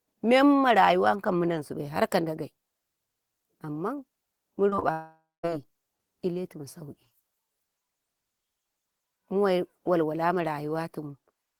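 Speech, with a cluster of short concealed packet loss events at 4.69–4.73 s, 4.75–4.79 s and 4.79–4.84 s. At each, about 20 ms of audio failed to arrive in time, and the receiver bridged the gap with roughly 20 ms of synthesized continuation, extending the preceding pitch or noise before crossfading back to real signal. The result is a rapid series of small smears or wobbles. Immediately after, from 4.92 to 5.45 s, the sound degrades into a fading buzz or hiss that ends in about 220 ms of near silence before the speech resumes. Roughly 520 ms of audio is missing here, replaced by about 517 ms of concealment output. The likely cause is a long network dropout, where the concealer extrapolates the last sound, lets it decay as no new audio arrives, then picks up later with the lost segment absent.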